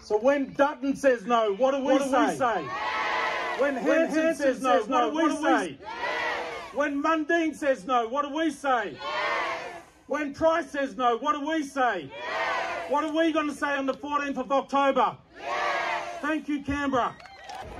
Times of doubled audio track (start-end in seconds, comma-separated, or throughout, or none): 1.86-5.66